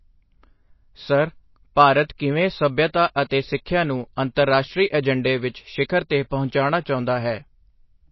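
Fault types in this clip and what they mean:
MP3 compression: The speech sounds watery and swirly throughout, with smeared consonants. Nothing is present above about 5.8 kHz. That fits a low bitrate near 24 kbps. Likely cause: a starved MP3 encoder cutting the treble and dropping weak frequency lines frame by frame.
Pre-echo: At 3.29 s, after "ਸਰ ਭਾਰਤ ਕਿਵੇਂ ਸੱਭਿਅਤਾ" and before "ਸਿੱਖਿਆ ਨੂੰ", a short hiss of about 20 ms comes just ahead of a sharp onset. The codec spread that attack's quantisation noise back across its block, so the attack sounds softened.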